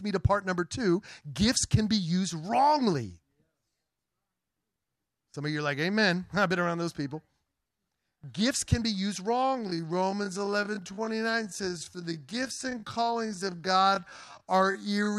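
Speech that runs at a normal pace until 9.27 s, where it abruptly slows to about 0.55 times its original speed and stays there to the end of the clip, while the pitch holds steady. This is a time-stretched section, likely from software lengthening the audio to fill a duration by repeating short fragments of the waveform. The slowed portion drags, with syllables drawn out unnaturally.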